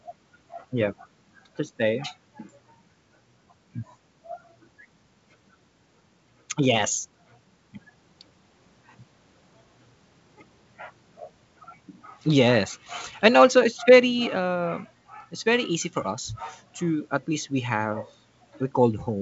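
Nothing stood out on listening to this speech recording, which comes over G.722 wideband telephone coding at 64 kbit/s.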